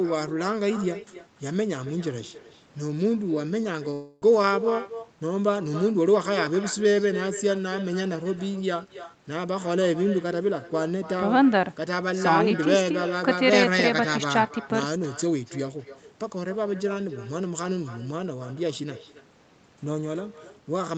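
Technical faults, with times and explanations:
Throughout: echo with no canceller. A quieter, thinner copy of the speech returns roughly 300 ms later, about 13 dB down, as a far-end loudspeaker leaks into its microphone uncancelled.
3.93–4.23 s: long network dropout, the likely cause of a gap where the last sound is stretched into a fading buzz, briefly silent, then resumes with about 200 ms missing.
4.78–5.03 s and 6.23–6.72 s: jitter buffer speed-up. Speech runs faster at unchanged pitch, at 114% then 109%, as roughly 50 ms of pitch periods is trimmed each time to reduce delay.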